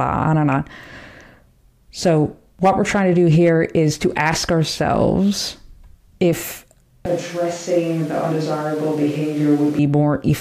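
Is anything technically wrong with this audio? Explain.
Yes. From 7.06 s to 9.79 s the speech suddenly turns roomy and hollow, loses body in the bass, drops by about 5 dB, and sits over more room noise, roughly 25 dB below the speech. It snaps back just as abruptly at 9.79 s. This is likely a switch to a distant microphone: the close mic's signal dropped out, so a mic further away carried the speech, picking up more reflections and ambience and less of the direct sound.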